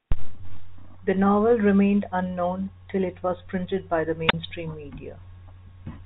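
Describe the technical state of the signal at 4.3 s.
At 4.26 s the signal suffers a wireless microphone squelch dropout lasting until about 4.34 s. The radio carrier weakens, hiss briefly swells, and the receiver's squelch gate shuts the output for roughly 33 ms before the speech comes back. On a waveform this shows as a short burst of noise followed by a flat, near-zero gap; a spectrogram shows broadband static, then a thin vertical blank band, its upper edge held at 4 kHz by the telephone-band coding.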